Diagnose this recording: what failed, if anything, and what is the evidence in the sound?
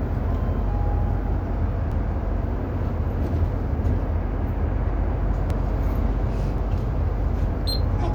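Likely dropped buffers (overrun) at the driver: unread audio was overwritten, so the sound jumps ahead at 1.92 s (around 40 ms lost), 5.50 s and 6.58 s.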